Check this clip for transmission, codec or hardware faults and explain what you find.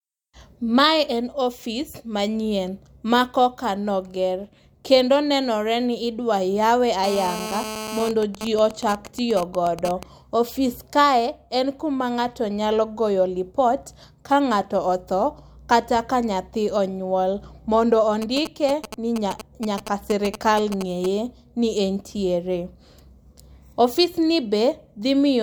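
Two kinds of interference from a nearby 2G (GSM) handset are present, both picked up by the audio circuitry rather than carried in the speech.

GSM phone buzz, 7.04 to 8.09 s: a hard, raspy buzz at about 217 Hz, rich in harmonics and sitting about 9 dB below the speech. The phone was on a call, transmitting radio bursts 217 times a second, and some stage in the audio path rectified those pulses into sound. Unlike mains hum at 50 or 60 Hz, it is higher and buzzier.

GSM signalling bursts, 8.11 to 10.03 s and again from 18.22 to 21.06 s, roughly 10 dB below the speech: rather than a continuous buzz, these come as short 217 Hz buzzes, as even ticks with a longer buzz twice a second in the first stretch and as a galloping dit-dit-dit in the second. In the first stretch the call continues but the phone's user is silent, so the handset transmits only intermittent groups of bursts. In the second the phone is signalling on the network with no call. 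The same rectification turns each group into a brief rasp. The broken rhythm separates this from the steady buzz of an active call, and the 217 Hz pitch inside each burst separates it from random clicks or dropouts.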